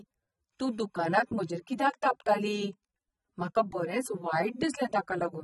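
A speech recording carries AAC compression damage from start to finish, plainly audible as a dull, smeared tone with a warbling, fizzy texture on sustained sounds and sibilants. Nothing survives above 11.5 kHz, so a spectrogram shows a hard ceiling there, with patchy holes and blurred, noise-filled bands below it. The likely cause is AAC-LC encoding at a bitrate low enough to starve the quantiser, which fits roughly 24 kbps.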